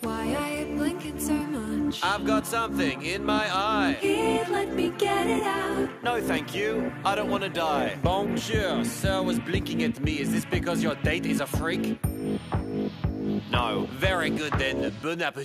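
The signal holds steady for its whole duration, with nothing in its level, continuity or tonal balance that points to a problem in the recording or transmission chain.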